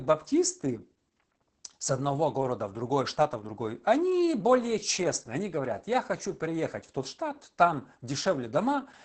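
The speech in this clip has gone through Opus voice compression at a very low rate, which points to roughly 10 kbps, coded with SILK linear prediction and wideband cut-off near 8 kHz. Throughout, the coarse excitation leaves the speech muffled, hoarse and slightly robotic.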